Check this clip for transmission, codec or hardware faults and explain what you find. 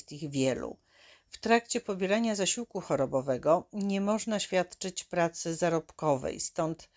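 Nothing stood out on listening to this clip, and there is nothing to report.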